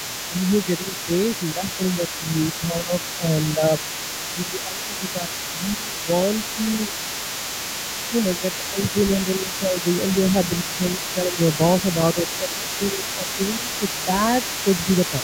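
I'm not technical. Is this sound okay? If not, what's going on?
No, not quite. Throughout the clip you can faintly hear the other side's voice leaking through, likely because the echo canceller didn't fully remove their audio coming from the loudspeaker.

There's also speech suppressed in double talk: the main voice dips or cuts out in spots around 0.07–3.81, 4.34–6.9, 8.08–9.85, 10.64–14.1 and 14.85 seconds to the end. That's likely from both sides talking at once.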